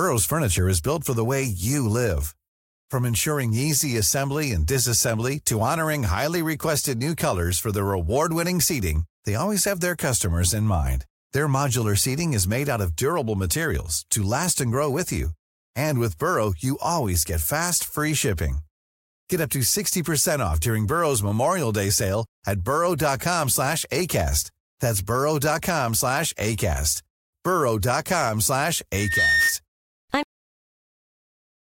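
Loudspeaker feedback squeal from 28.94 to 29.58 s: the microphone is hearing its own loudspeaker, and at 1.8 kHz the loop gain tops unity. A pure tone swells over roughly a third of a second until it rises a few decibels above the speech.

A cut-off end at 30.23 s: the final stretch of audio was never written out, so the speech halts mid-sound and falls straight to digital silence. There is no natural decay, and nothing follows through to the close of the file.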